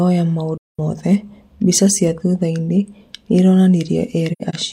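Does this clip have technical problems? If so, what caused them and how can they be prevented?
Yes. The speech has two soft-edged gaps from AAC frame loss with muting, at 0.57–0.80 s and 4.32–4.55 s. Missing frames were decoded as silence, and overlapping windows faded sound out and back in. The second gap is scattered, its longest hole about a tenth of a second. Retransmission or error protection on the transport would prevent it.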